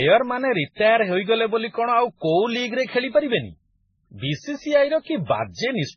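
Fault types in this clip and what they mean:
Transcoding between lossy codecs: the speech sounds dull, with nothing above 6.3 kHz, and carries layered swirly, smeared artefacts from several codecs at once. The likely cause is repeated lossy encoding, which fits low-bitrate MP3, then AAC, then MP3 again, each compounding earlier damage.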